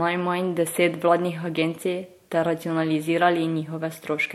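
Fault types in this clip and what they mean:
Transcoding between lossy codecs: the speech carries two overlapping sets of compression artefacts, likely from low-bitrate MP3 re-encoded as Vorbis. On a spectrogram, energy stops flat at 16.5 kHz, with smeared, blotchy high bands where the second encoder wasted bits re-coding the first's errors.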